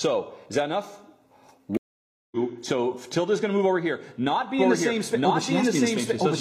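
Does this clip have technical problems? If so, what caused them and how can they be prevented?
Yes. At 1.77 s a stream reconnect cuts the sound for 0.55 s, until 2.37 s. The connection dropped, the player reconnected and restarted its decoder mid-stream, so playback resumes about half a second further on. Buffering deeper and retrying without tearing down the decoder prevents this.

From 4.59 s to the end there is a doubled audio track: a full-band copy at roughly the original level trails about a second behind, dry and starting abruptly. It is likely the same source captured again through a slower path. Routing each source through a single capture path prevents it.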